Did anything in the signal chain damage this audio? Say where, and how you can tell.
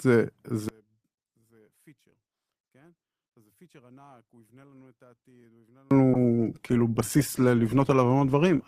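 Yes. From 0.69 s to 5.91 s the speech falls by about 36 dB, leaving only a faint residue. The likely cause is one channel inverted, a polarity reversal in the analogue wiring. When the two channels are summed to mono, their shared centred content cancels and only their small difference survives. A dropout or mute would leave silence, but here a faint trace persists.

From 6.14 s to the end, the speech is coded more coarsely. This is a call bitrate drop at the network and codec stage. The bandwidth estimate fell, and the encoder went from 32 kbps to 15 kbps, holding the lower rate for about 2.3 s, so each frame is quantised more crudely. Packet loss would leave gaps or glitches, but this degradation is continuous, with no breaks in the sound.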